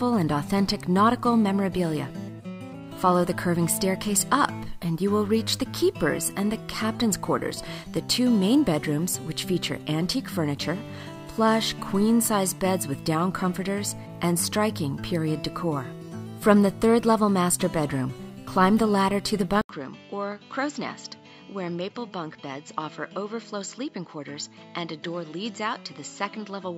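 At 19.61 s the audio cuts out for 80 ms, then returns about 10 dB quieter, duller and boxier, with nothing above 7.6 kHz and a new noise floor some 40 dB down to the end. The input likely switched to a poorer device.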